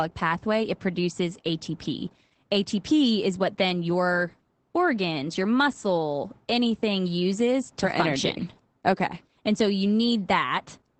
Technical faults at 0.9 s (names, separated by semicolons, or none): Opus voice compression